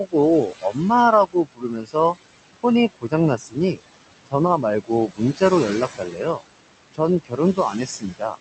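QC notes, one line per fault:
Throughout: noise suppressor artifacts. The suppressor pulls down whatever it judges to be steady background by about 20 dB, deciding band by band and frame by frame. The room noise, sitting roughly 12 dB under the speech, drops away in the gaps and creeps back in beneath the talking. The top end stops around 8 kHz, which is just the call codec's bandwidth.
0.05–0.15, 0.47–0.78, 1.26–2.17, 2.57–3.79, 4.26–5.42, 5.97–6.43 and 6.93–8.38 s: speech cut by the noise suppressor. In each stretch the suppressor mistook quieter parts of the speech for noise and pushed them down with the background, by about 20 dB at the worst point (about 16 dB in the 5.97 s run). Soft consonants and word tails sound swallowed or faint. Part or all of each range is hit, from a tenth of a second early on up to most of a second in the final stretch.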